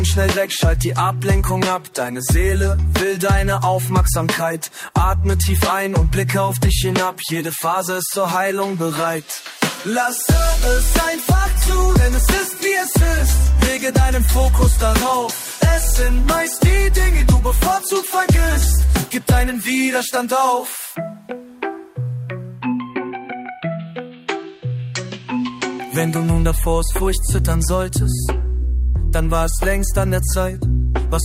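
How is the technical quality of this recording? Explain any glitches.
There are no glitches to explain in this recording. Nothing in the audio stands out as a technical problem.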